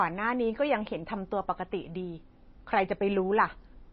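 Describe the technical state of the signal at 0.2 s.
MP3 compression is audible at 0.2 s and across the whole clip. The speech has nothing above 5.8 kHz, and its texture is watery and swirly, the damage plainly audible and in keeping with a low bitrate around 24 kbps. The likely cause is an MP3 encoder starved of bits. It cut the treble at a fixed frequency and zeroed weaker spectral lines, which flicker on and off from frame to frame and leave s sounds chirpy and onsets smeared.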